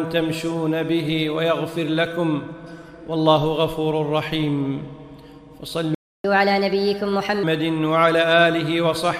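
At 5.95 s the sound cuts to silence for about 0.3 s, a playback stall, likely because the player ran out of buffered data. From 6.24 s to 7.43 s comes catch-up at higher speed: the backlog is resampled to 1.25 times normal speed, raising pitch roughly four semitones before returning to normal.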